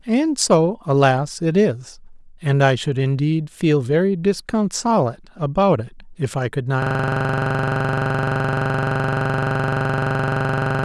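At 6.82 s a system hang loop begins: the host or driver stalled while the audio hardware kept replaying its ring buffer. One 42.67 ms slice repeats until the end, producing a rough 23.4 Hz buzz, which fits a 1024-sample buffer.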